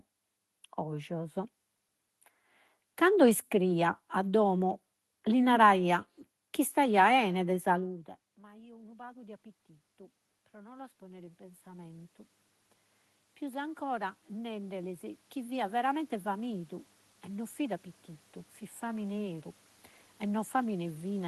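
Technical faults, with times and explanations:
7.76–12.09 s and 13.23 s to the end, automatic gain rising: after the talker moves away at around 7.5 s, the input level drops by about 24 dB. The gain control slowly adds about 11 dB, so the voice and room noise swell together. It climbs again from 13.23 s.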